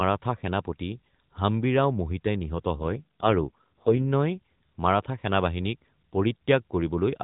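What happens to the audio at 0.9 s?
Nothing goes wrong at 0.9 s: the speech carries straight through that moment with no dropout, click or other fault, just the narrowband AMR-NB phone-line sound running at 12.2 kbps.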